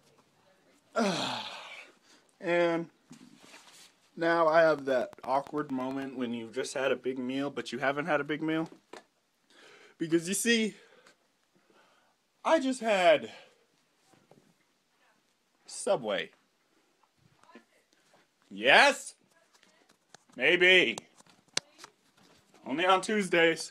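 From 4.79 to 6.03 s a steady ticking rides over the sound: a train of clicks, about ten of them, evenly spaced at 8.9 per second and peaking roughly 5 dB above the surrounding audio. Each click has much the same shape, which points to a repeating external pulse rather than anything in the material itself, likely interference from nearby equipment or a faulty connection or power supply injecting the same spike into the signal.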